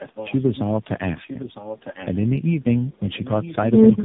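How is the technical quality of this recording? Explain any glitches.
The recording is degraded by two faults: tandem speech coding across the whole clip, and an echo leak that comes and goes.

Tandem speech coding runs throughout. Nothing is present above 3.8 kHz, and the speech sounds rough, muffled and warbly. That points to about four speech codecs in a row, AMR-NB among them, with each decoding and re-encoding the previous codec's already damaged output.

Echo leak occurs from 0.00 to 0.73 s, from 1.23 to 2.22 s and from 3.01 to 3.71 s. A faint copy of the speech trails 956 ms behind it, roughly 20 dB quieter. The likely cause is a far-end loudspeaker whose echo canceller let part of the microphone pickup return down the line.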